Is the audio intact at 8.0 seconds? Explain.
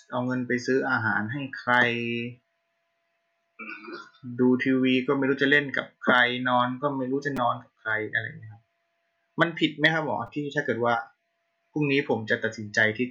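Yes, the speech at 8.0 seconds plays through intact, with no fault at that moment.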